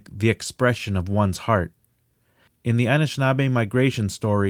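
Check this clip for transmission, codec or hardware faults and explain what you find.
No transmission, codec or hardware fault can be heard anywhere in the speech. There is nothing here to report.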